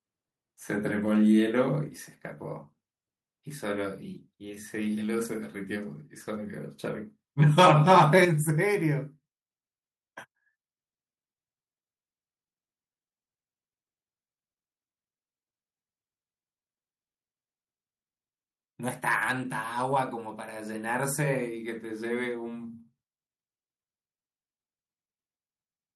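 At 8.25 s the speech and the background behind it drop together in one sudden step, about 7 dB quieter, and stay there. This is a microphone volume stepped down, likely the call software cutting the device's input volume because it judged the level too high.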